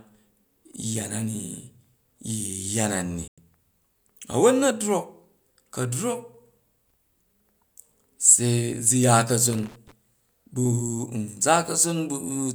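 At 3.28 s the speech drops into a digital broadcast dropout: the receiver lost a few frames, about three judging by the gap, and muted for roughly 96 ms with a very fast fade, so there's a clean hole until good frames resume at 3.38 s.

Then from 9.53 to 9.92 s there's loose connector crackle, an irregular scratchy burst where a worn or dirty contact keeps making and breaking, chopping the signal into rapid fragments.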